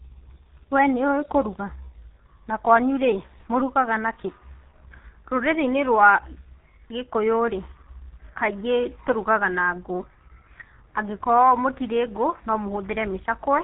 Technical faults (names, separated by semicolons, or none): G.723.1 codec